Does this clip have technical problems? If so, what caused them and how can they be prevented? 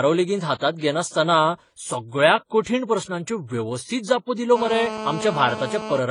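Yes. Right through the clip the speech has nothing above about 10.7 kHz and carries two kinds of coding artefact stacked together. That's most likely transcoding between lossy codecs: it sounds like a low-rate AAC-LC encode, around 24 kbit/s, later re-encoded as HE-AAC at something like 48 kbit/s. The second pass wastes bits preserving the first one's damage, and the first pass's low cut-off remains. To prevent it, keep a lossless master and encode once, straight to the final format.

From 4.56 to 5.99 s, just after "प्रस्नांच्यो वेवस्थीत जापो दिल्यो", a hard, raspy buzz at 217 Hz with lots of harmonics sits on top of the speech at about 9 dB below it. It doesn't follow the speech at all. That's GSM phone buzz: a 2G phone nearby, here on a steady call, sends its radio bursts 217 times a second, and the audio circuitry rectifies those pulses into audible sound. To prevent it, keep phones off or well away from mics, cables and interfaces while recording.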